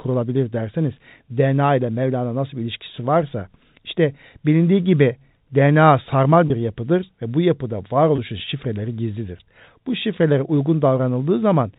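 Packet loss with pitch repetition at 6.48–6.50 s, just before "bir yapıdır ve bu", and 8.16–8.18 s, between "yapıdır ve bu yapıda" and "şifreleri gizlidir": each gap, which fits one 20 ms packet, is filled by repeating the last pitch period. It sounds like a briefly held, buzzy note and shows as identical repeated cycles in the waveform and frozen, evenly spaced harmonics on a spectrogram.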